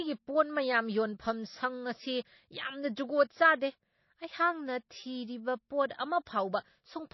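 Throughout, the speech sounds watery and swirly with nothing above 5.8 kHz, likely MP3 compression at a low bitrate, which fits about 24 kbps.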